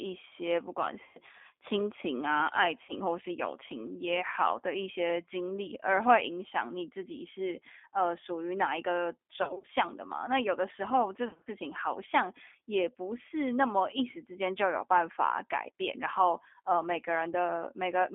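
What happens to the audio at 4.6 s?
At 4.6 s the speech carries the G.729 codec sound that runs through the whole clip. The codec rebuilds each 10 ms frame from a vocal-tract filter, a pitch predictor and a handful of pulses, and the sound is squeezed into a 250 Hz to 3.5 kHz band and takes on a rough, slightly synthetic edge, which fits an 8 kbit/s coder. A plain telephone band filter would only dull the sound, without this artificial roughness.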